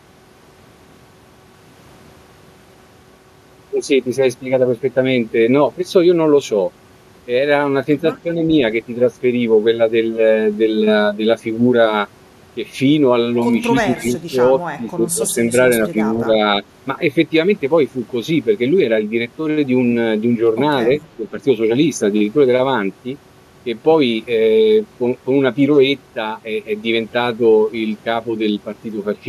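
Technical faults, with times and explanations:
13.82 to 21.27 s, speech suppressed in double talk: the voice dips at 13.82–14.40, 14.77–15.54, 15.83–15.96, 16.25–16.39 and 21.17–21.27 s, by up to about 15 dB in the first two and about 5–10 dB after. The likely cause is an echo canceller ducking the near talker while the far side also speaks. The dips are partial and recover within each stretch, unlike the hard silences of dropped packets.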